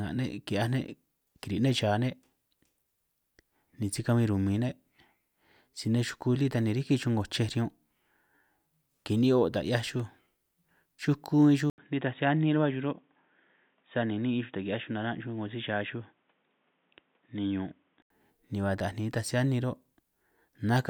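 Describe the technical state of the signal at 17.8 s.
At 17.8 s you're still inside the dull stretch that runs from 11.70 to 18.10 s, and it sounds like the input switched to a poorer device, likely a fallback mic or a headset call profile. Nothing gets through above 3.8 kHz, so the speech is boxy and muffled. It's also a few dB quieter, with a new noise floor sitting around 45 dB down. The switch into it came with an 80 ms gap.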